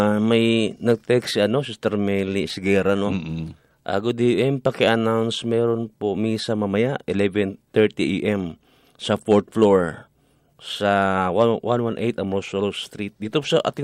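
No technical faults are audible.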